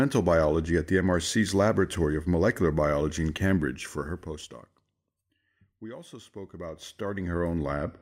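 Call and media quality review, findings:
Zipper noise, 3.6–5.16 s and 6.24–7.76 s. Gain stage stepping the level in 1 dB increments, around 30 steps a second, without smoothing. Fade down about 20 dB, then back up. Each step clicks, giving a fast ticking zip over the speech.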